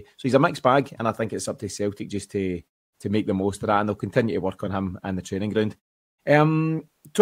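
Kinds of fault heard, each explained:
No kinds of fault are heard in the clip.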